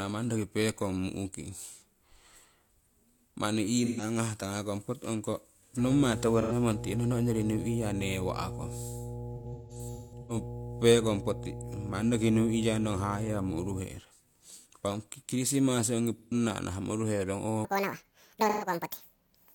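The speech has three kinds of fault. AAC frame loss with concealment appears as brief smeared, noisy patches at 3.79–4.02, 6.41–6.52, 16.19–16.34 and 18.49–18.65 s, with a cluster of gaps scattered across 9.35–10.36 s, the longest about 150 ms. The decoder guesses the missing audio from the last good spectrum, so these are blurred fill-ins rather than true dropouts or clicks. Mains hum at 60 Hz, roughly 10 dB below the speech, runs from 5.80 to 13.80 s and then stops. It is a steady low tone, unlike broadband noise, and typical of a ground loop or transformer pickup. From 17.65 s to the end, a section at the wrong speed plays 1.84 times too fast, raising pitch by about ten semitones with a hurried tempo. Because pitch and timing shift together, it is not a pitch-shift effect; likely cause is a clock mismatch.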